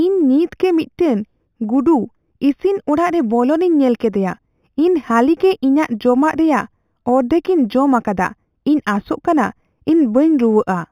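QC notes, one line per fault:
Throughout, imaging from linear upsampling: the speech sounds like 8 kHz material raised to 48 kHz by joining samples with straight lines. The top end is dulled, and a faint mirrored copy sits at 4 to 8 kHz, roughly 35 dB down, adding a light metallic shimmer on sibilants.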